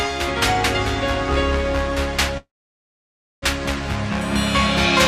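A call audio freeze runs from 2.37 to 3.44 s: the sound stretches into a brief fading fill, then about 0.96 s of silence, before resuming where it stopped with nothing lost and everything after arriving 1.05 s later. Likely cause: delayed packets draining the jitter buffer.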